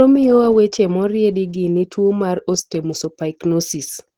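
Right from the start and for the whole clip, the speech has a hoarse, muffled quality with a grainy, noisy texture in the upper range, even though content still reaches up to about 20.1 kHz. That's likely Opus compression in its hybrid mode, where a speech-style coder handles the lower band and the higher bands get filled in coarsely. The damage is plainly audible and fits a low bitrate of around 16 kbps.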